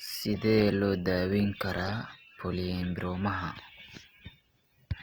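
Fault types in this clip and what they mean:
Opus compression: throughout, the speech sounds grainy and rough, likely from Opus music-mode coding near 24 kbps filling starved bands with noise.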